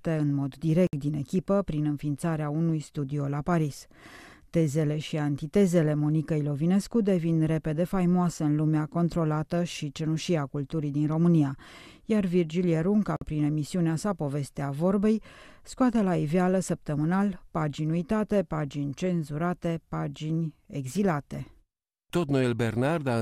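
A speech clip with two short gaps at joins of encoded pieces. Silence of about 60 ms opens from 0.87 to 0.93 s, between "în mod" and "din echipă prin înființarea". Another of 50 ms falls from 13.16 to 13.21 s, before "prin emisiunea sa". Each piece was encoded separately. Encoder start delay and last-frame padding were left in at the joins.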